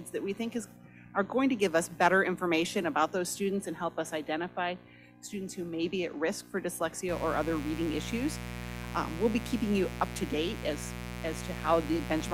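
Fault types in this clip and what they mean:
Mains buzz: Sharp switching spikes from the 60 Hz power supply leak into the signal, twice per cycle, spreading harmonics up into the kilohertz range. A steady, raspy buzz enters at 7.08 s and runs to the end, fairly loud, only about 10 dB below the sound.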